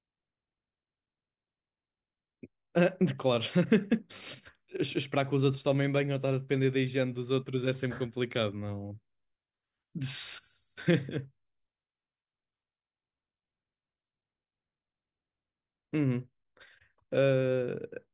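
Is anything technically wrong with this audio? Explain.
No, nothing technically wrong stood out on listening to this speech recording.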